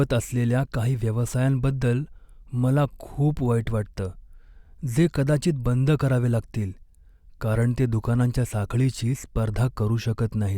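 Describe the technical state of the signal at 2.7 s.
At 2.7 s the speech is intact, with no dropout, clipping, distortion or other audible fault at that moment.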